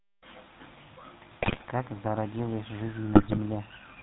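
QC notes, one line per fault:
throughout: GSM full-rate codec. The speech has a buzzy, gravelly roughness that is plainly audible. Nothing above 4 kHz survives. The vocal tract is modelled and driven by coarse, regularly spaced pulses, which fits the 13 kbps full-rate codec.
1.40–1.67 s and 3.14–3.39 s: GSM bit errors. Each stretch breaks into squawks, pops and gargling for about a quarter second. Corrupted filter, pitch and gain values distort the spectrum and level frame by frame, which points to a few percent of bits flipped over roughly a dozen frames.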